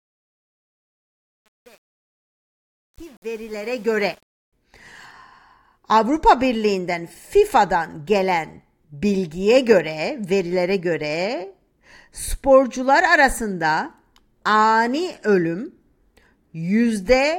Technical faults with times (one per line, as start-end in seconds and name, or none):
0.00-4.53 truncation distortion on a fade